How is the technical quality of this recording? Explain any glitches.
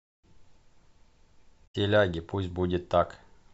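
One glitch spoils an otherwise steady recording. From 1.63 to 1.76 s there is damaged data in the compressed stream. Corrupted bytes made the decoder misread those frames and lose sync while it searched for the next valid header. The result is a brief glitch lasting about 120 ms.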